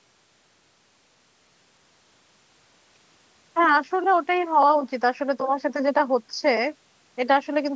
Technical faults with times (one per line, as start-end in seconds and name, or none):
none